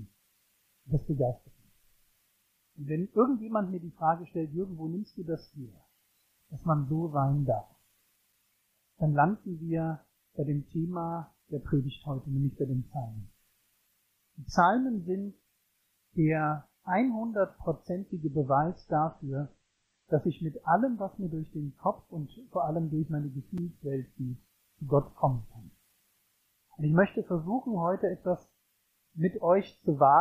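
Two blocks of digital silence show up as quick ticks at 8.33 s and 23.58 s. Each is a hole of about 5 ms where the output dropped straight to silence and came back with no fade, which points to the program missing its buffer deadline. Between 18.08 s and 20.08 s the adaptive stream drops to a lower bitrate. Everything above 8.3 kHz vanishes and codec smearing appears, which fits a step down from around 128 to 32 kbit/s MP3. Then full quality snaps back without any gap.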